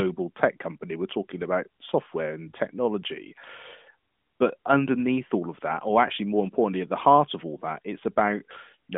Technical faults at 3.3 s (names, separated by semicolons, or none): none